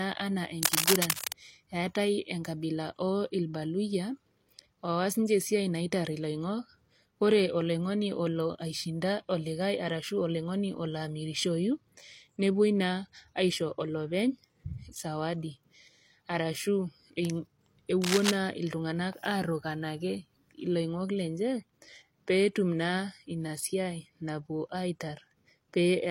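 A speech recording with two bursts of cable scratch noise. The first runs from 0.58 to 1.36 s. The second, shorter one runs from 18.02 to 18.37 s. Each is a dense, uneven crackle that rides over the speech at roughly the same loudness as the voice. The likely cause is a worn cable, connector or control being moved. Its contact resistance then jumps about rapidly, and that shows up as scratchy noise in the signal.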